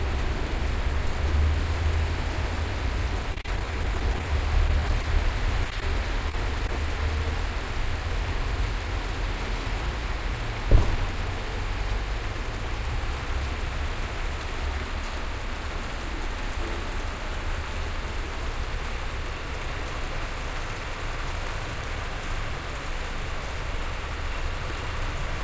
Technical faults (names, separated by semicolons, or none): repeated packet loss (robotic sound); scattered short gaps